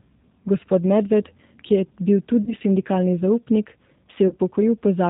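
Throughout, the speech sounds band-limited, with nothing above 4 kHz, and plainly rough and slightly synthetic. That is the G.729 codec, which rebuilds speech from a vocal-tract filter, pitch predictor and sparse pulses, a character that fits its 8 kbit/s G.729A form.

From 2.44 to 2.54 s, just before "sindikalni zaupnik", and again from 4.28 to 4.34 s, right after "sindikalni zaupnik", the speech briefly smears into a fading buzzy tone or coloured noise. This is VoIP packet loss concealed by the speech codec: about 30 ms of audio, which fits one lost packet each time, went missing. The decoder stretched its last frame and faded it, and the sound stays weakened until it rebuilds.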